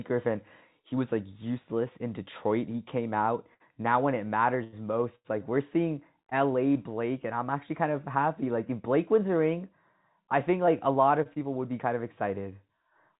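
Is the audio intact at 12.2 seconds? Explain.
Yes, the audio is intact at 12.2 seconds, with only the narrow telephone-style band of the call path, which carries nothing above 4 kHz.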